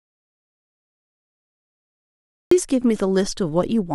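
From the very first instant the clip is dead silent, with no room tone or hiss at all, and the speech only arrives at 2.51 s, abruptly and already in mid-flow. That is an audio dropout to silence, under way before the clip begins and lasting about two and a half seconds. The input was likely lost for that stretch, through a disconnected device, failed link or stray mute, while the recorder kept writing silence, so whatever was spoken then is gone.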